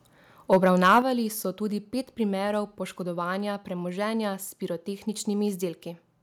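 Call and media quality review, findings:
Harsh crackle on the loudest peaks at 0.52–0.57 s and 0.84–0.99 s, just before "so tudi pet primerov". Likely microphone overload: input about 4 dB past converter limit, tops flattened, roughly a tenth then a twentieth of samples clipped.

Sudden drop in level of voice and background about 7 dB at 1.02 s, right after the second distorted peak. Likely microphone volume stepped down by call software reacting to the clipping.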